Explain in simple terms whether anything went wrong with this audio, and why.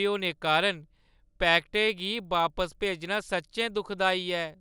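A resampler restarted on every 50 ms block leaves a 20-per-second tick-buzz throughout. Unlike steady hum, it stops whenever the speech pauses.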